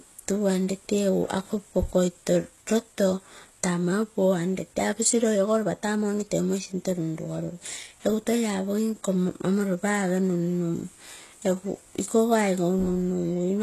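From start to finish the speech has that HE-AAC compression sound: the treble is bright but synthetic, with s sounds going gritty and a bit lispy, and nothing at all above 12.3 kHz. It's likely a very low-bitrate encode, which fits about 16 kbps, with the top end rebuilt from copied lower bands.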